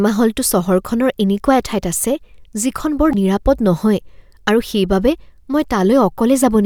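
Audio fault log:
3.11–3.15 s: damaged data in a compressed stream. A fault of about 40 ms cuts into the speech as the decoder misreads corrupted frames, loses sync and hunts for the next valid frame header.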